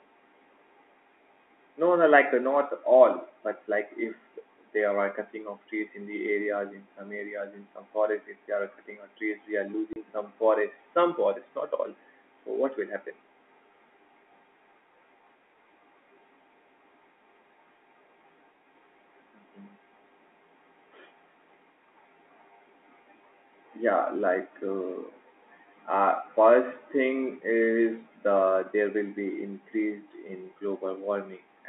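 At 9.93 to 9.96 s the speech drops out for 30 ms, a case of packet loss filled with silence: what fits a single lost packet was replaced by silence, leaving a flat gap in the waveform and a blank vertical stripe across the G.711 telephone band on a spectrogram, with hard edges at both ends.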